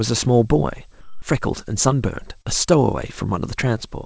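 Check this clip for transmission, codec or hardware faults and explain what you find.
Two transmission faults appear in this speech, carried over a call path whose spectrum stops at 8 kHz, which fits a wideband codec such as G.722.

From 1.01 to 1.22 s there is comfort noise in place of the background, likely because the sender's voice detector stopped transmission. A steady synthetic hiss about 2 dB quieter replaces the real room sound, which sits about 28 dB below the loud parts. On a spectrogram the background texture becomes a flat, uniform band.

From 2.42 to 2.48 s there is short concealed packet loss. About 30 ms never arrived, and the decoder filled it by extending the preceding sound before blending back. It is heard as a brief smear or wobble.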